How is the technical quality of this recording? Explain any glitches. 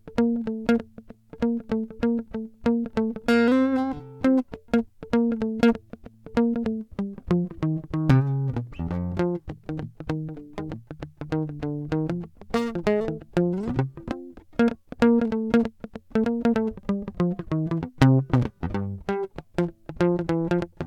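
Nothing in the music stood out as a technical problem on listening, so there are no glitches to explain.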